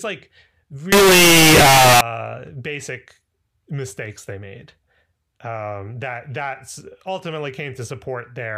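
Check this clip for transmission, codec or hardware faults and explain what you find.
One fault stands out. From 0.92 to 2.01 s, just before "basic mistakes they made", the speech turns into very loud, harsh distortion, and quiet moments sound as loud as everything else. This is likely signed and unsigned mixed up. Flipping the top bit of the 16-bit samples turns each zero crossing into a jump across the whole range.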